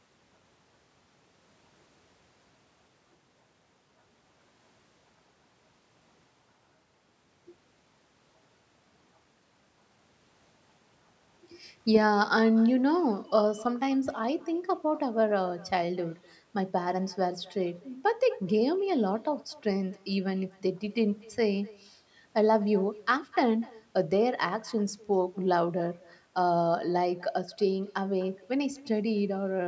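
Throughout the speech, an echo with no canceller trails every phrase. The far end plays the call through a loudspeaker, its microphone catches it, and nothing strips it out, so the talker returns after the network round trip, roughly a third of a second late and about 24 dB down. Unlike room reverberation, which blurs straight out of each syllable, this is a distinct, delayed, thinner repeat. The audio carries nothing above 8 kHz, as expected from call microphone processing.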